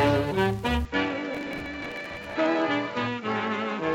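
At 0.85 s the sound abruptly goes duller, with nothing above 7.6 kHz, drops about 5 dB, and picks up a new noise floor with no gap, likely the input switched to a poorer device. Then from 1.34 to 2.36 s there's gritty processor overload crackle: lots of missed deadlines repeating stale audio, which fits buffers around 10 ms.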